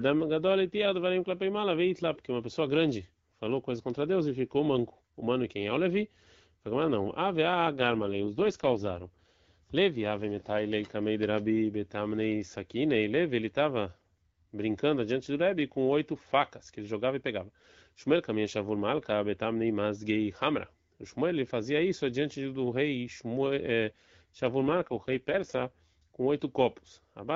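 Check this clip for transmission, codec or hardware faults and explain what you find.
Two short stretches of AMR rate drop stand out in this speech, heard over a wideband AMR-WB (HD Voice) link.

From 7.74 to 9.26 s, just after "mas não ave", and again from 24.60 to 26.03 s, the voice turns rough, buzzy and more synthetic, with the band and continuity unchanged. That points to the codec stepping down from about 12.65 to 6.6 kbit/s, trading speech detail for error protection on a weak radio link.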